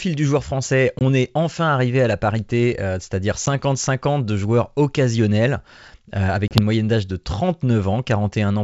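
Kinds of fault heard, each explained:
Packet loss on an ADPCM call: three abrupt silent holes, 10 to 30 ms long, each followed by slightly distorted speech while the decoder's predictor regains step.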